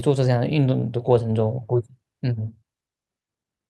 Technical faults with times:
none

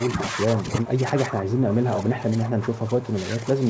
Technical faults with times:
0.00-3.70 speech suppressed in double talk

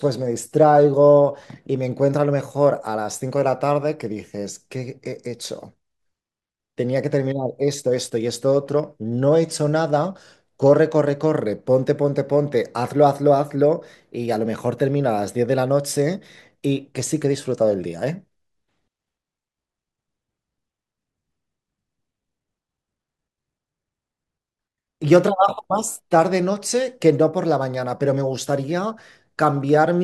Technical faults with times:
none

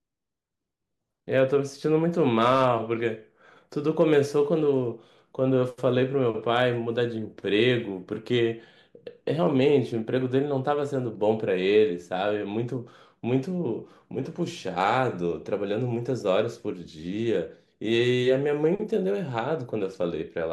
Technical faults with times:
2.38-2.68 hard clipping
4.01-4.18 hard clipping
6.54-6.63 hard clipping

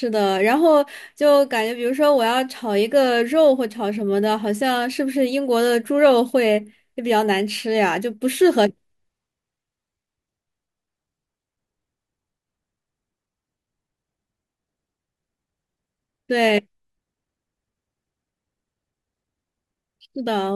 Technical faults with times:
none

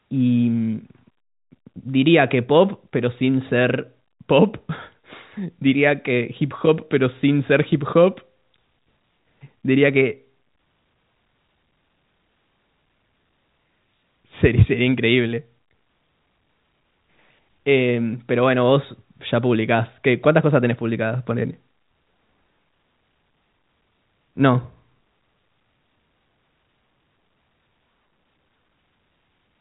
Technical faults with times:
none

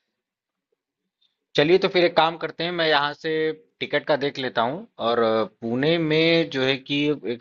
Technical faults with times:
none

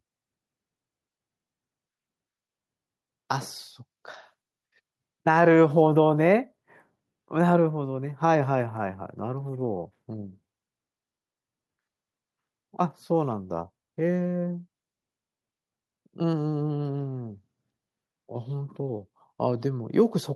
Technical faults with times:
none

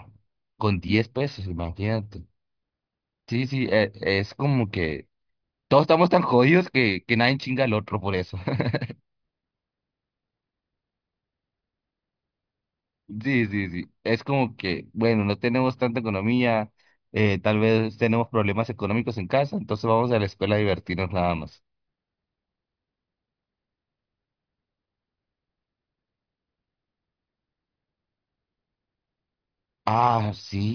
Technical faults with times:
none

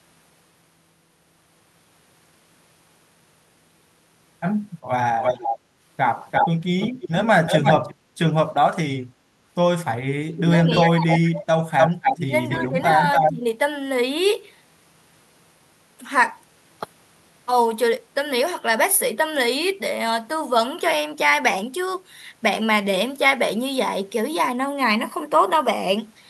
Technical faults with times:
5.20-5.58 echo leak
6.31-7.95 echo leak
7.95-8.14 background gated by the echo canceller
9.05-9.33 background gated by the echo canceller
10.29-10.88 echo leak
10.48-11.72 speech suppressed in double talk
11.78-13.32 echo leak
12.25-13.46 speech suppressed in double talk

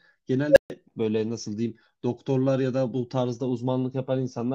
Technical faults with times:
0.50-0.70 unstable filter

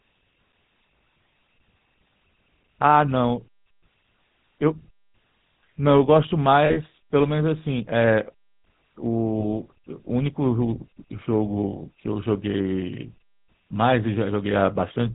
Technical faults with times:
0.00-15.15 GSM full-rate codec
6.66-6.77 lost GSM frames
9.40-9.45 lost GSM frames

